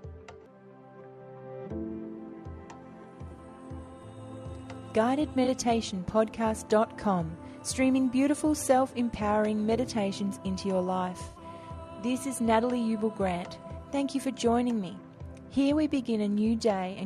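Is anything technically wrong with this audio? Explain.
Yes. There are three instances of corrupt frame concealment, at 3.28 to 3.39 s, 5.44 to 5.49 s, and 11.29 to 11.39 s. Damaged AAC frames were detected by the decoder and replaced with muting or a scrambled copy of the previous spectrum. Each spans roughly 0.05 to 0.1 s, matching a short run of lost frames.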